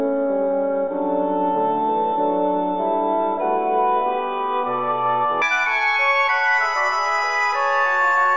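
From 5.42 s to the end, a wrong sample rate fault appears. Playback runs twice as fast, raising pitch an octave. This fits 8 kHz audio played at 16 kHz.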